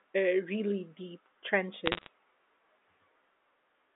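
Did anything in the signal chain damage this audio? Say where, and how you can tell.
Yes. Bit errors on a digital phone line damage the speech from 1.86 to 2.07 s, in the transmission stage. A short burst of sharp ticks and crackle sits on top of the speech, which continues unchanged underneath. Each flipped bit corrupts a single 8-bit G.711 sample, and flips that land on high-order bits or on the sign of a loud sample throw that sample far off, producing a click. The density of the crackle points to a bit error rate of around half a percent across that stretch, heard through the telephone band of 250 Hz to 3.6 kHz.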